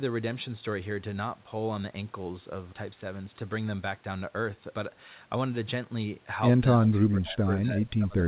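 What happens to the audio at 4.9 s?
At 4.9 s the speech runs on intact, with no dropout, glitch or other fault at that point.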